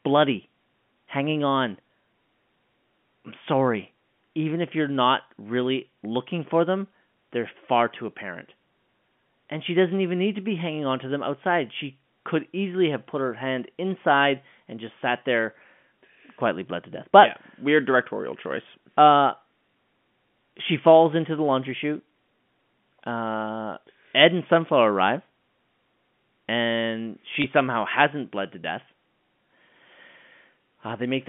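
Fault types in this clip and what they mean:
Packet loss with pitch repetition: a 20 ms gap at 27.42 s, bridged by repeating the last pitch period, sounds like a brief buzzy hold before "somehow hasn't bled to".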